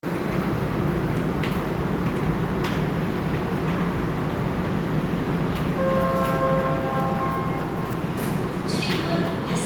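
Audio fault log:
No fault is audible anywhere in these sounds.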